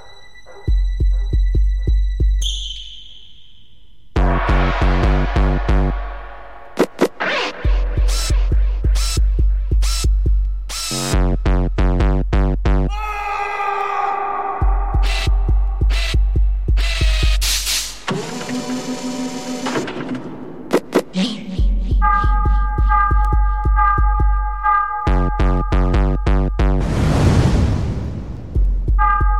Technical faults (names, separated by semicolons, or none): none